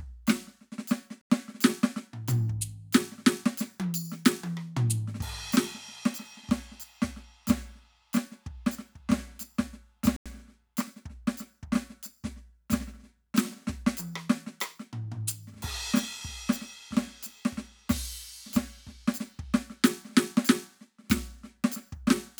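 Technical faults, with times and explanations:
1.21–1.30 s and 10.16–10.26 s, block of digital silence: the music drops to silence for about 86 ms and then about 93 ms before resuming. The cut has no fade in or out, and the stretch between is heard as a brief hole. This fits the output buffer not being filled in time. The second gap's length matches a 4096-sample buffer going out empty.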